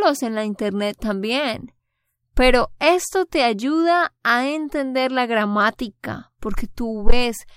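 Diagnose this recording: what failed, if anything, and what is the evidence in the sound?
A faint, evenly spaced ticking runs under the speech from about 0.21 s to 7.44 s, roughly six or seven ticks a second and around fifty in all. These are clock slip clicks at the converter stage, likely from two devices running on independent clocks that differ by something on the order of 150 ppm. Each time that mismatch builds up to a full sample, one sample is dropped or repeated, leaving a tiny discontinuity that is heard as a click.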